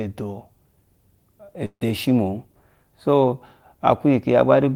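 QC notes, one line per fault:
1.65–1.83 s, long network dropout: the speech turns into a fading buzz for about 155 ms, then goes quiet before resuming with about 160 ms of speech missing. The likely cause is a stalled stream. A short packet loss would be masked without audible silence.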